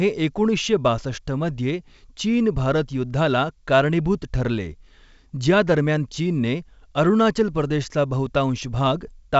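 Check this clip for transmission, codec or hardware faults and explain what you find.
No faults found; the speech is carried by G.722 wideband telephone coding at 64 kbit/s, with nothing above 7.7 kHz as that path implies and at most a faint trace of its coding.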